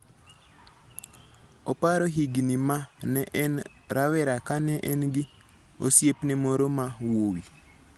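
Nothing's technically wrong in this speech recording; it's simply come through a WebRTC call path, where the Opus coding keeps the top end to around 12 kHz, as that sort of link normally does.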